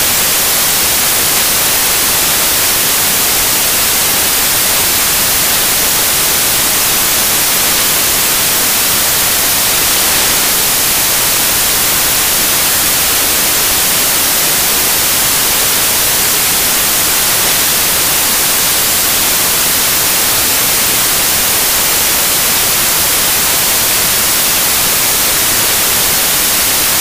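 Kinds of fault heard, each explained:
Samples built from the wrong bytes, throughout: the bytes of each sample are assembled in the wrong order or alignment, so rapidly changing low bits land in the most significant position, turning the audio into loud, harsh broadband noise, close to white on the louder sounds.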